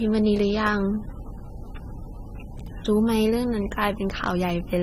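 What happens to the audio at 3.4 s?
At 3.4 s the speech carries the same transcoding between lossy codecs artefacts heard across the whole clip. Nothing is present above about 16.6 kHz, and two layers of coding damage sit on top of each other. The second encoder is likely spending its limited bits on reproducing the first encoder's errors, so the two codecs' artefacts are heard together. The sound fits low-bitrate AAC-LC followed by Vorbis at a similarly low rate.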